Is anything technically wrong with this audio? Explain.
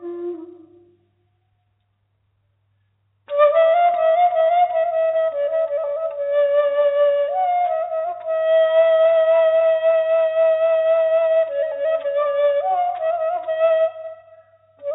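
No, nothing stood out on listening, and the top end stopping at about 4 kHz is simply what the G.711 mu-law call path carrying this audio passes.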